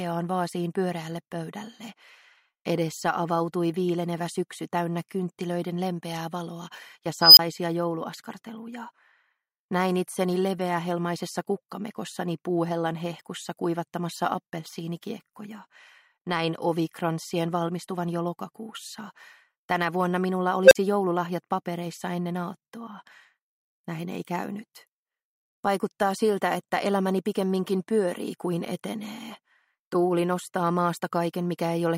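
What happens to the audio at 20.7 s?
A tone of around 500 Hz swells into a loud squeal over 60 ms, clips, then drops to 43 ms of silence, from 20.65 to 20.75 s: an unstable filter whose feedback grew until its numbers overflowed.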